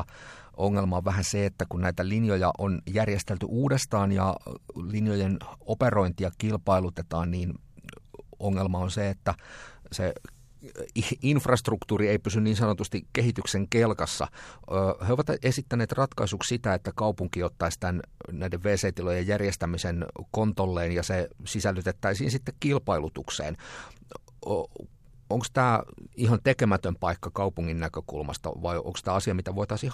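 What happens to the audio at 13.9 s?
Nothing goes wrong at 13.9 s: the speech carries on intact through that moment, with no dropout, click or other fault to be heard.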